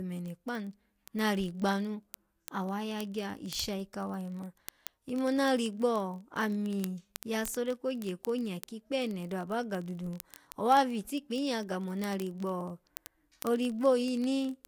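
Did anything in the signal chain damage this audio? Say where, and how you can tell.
Yes. From 0.12 s to the end, a steady stream of sharp ticks of uneven strength runs under the speech, roughly every 20 ms. These are word clock ticks at a digital link: the receiving device's unlocked clock drifts about 0.1 percent, slipping one sample each time.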